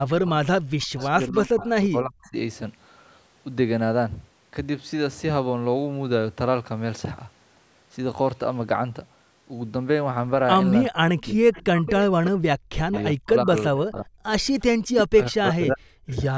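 Speech recorded over a call, with two faults. An echo canceller likely confused double talk with loudspeaker echo, producing speech suppressed in double talk: the voice dips deeply or drops out in pieces from 0 to 2.35 s, 10.89 to 14.27 s and 14.89 to 16.21 s. That canceller also likely left residual echo, an echo leak: faint copies of the voice return about 0.36 s late at 1.61 to 1.7 s, 11.23 to 11.91 s, 12.92 to 13.03 s, 14.3 to 14.64 s and 16.1 to 16.14 s.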